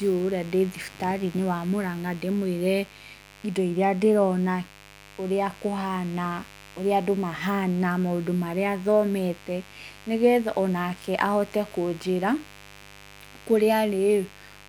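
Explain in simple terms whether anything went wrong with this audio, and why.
Yes, there's a mains buzz under the speech from start to finish, a steady raspy hum. Switching spikes from the 50 Hz power supply leak into the recording path.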